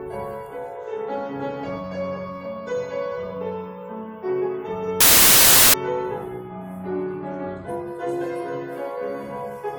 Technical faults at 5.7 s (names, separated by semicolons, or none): samples built from the wrong bytes